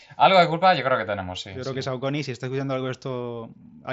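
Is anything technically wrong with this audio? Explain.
No, nothing is technically wrong: this is speech through a Bluetooth mSBC headset codec, with the wideband limit audible as an absence of content above about 7.7 kHz and only light codec grain on the louder sounds, as that path normally gives.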